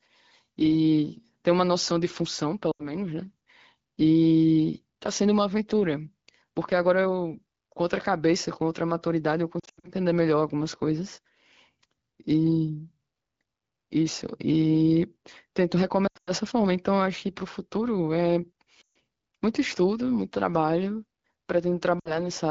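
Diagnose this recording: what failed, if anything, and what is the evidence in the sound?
Lost AMR speech frames from radio errors at 2.72, 9.59, 16.07, 18.81 and 22.00 s: concealment repeats prior settings with falling gain, showing as smeared, fading spectrogram bands.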